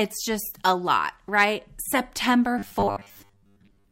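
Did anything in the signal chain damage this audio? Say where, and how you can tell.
Yes. Hard clipping occurs from 1.38 to 1.44 s, likely at the converter or a sample-format conversion. The peaks are driven about 3 dB past what that stage can pass, so they are sliced flat. The flattened tops add high harmonics, heard as a brief crackle.

From 2.59 s to the end, the speech turns into a rigid, metallic buzz at 100 Hz that only loosely tracks the syllables. This is robotic sound from repeated short buffers, likely at the driver or buffer stage. Most of the audio there is replaced by repeats of a 10 ms stretch, which fits a 10 ms buffer being replayed while fresh audio is skipped.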